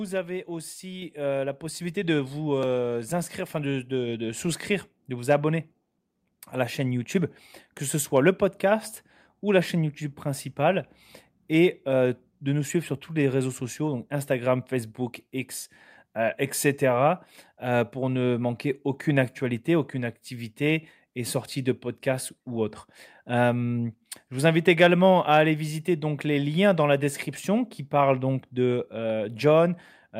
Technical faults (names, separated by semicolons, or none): microphone volume stepped up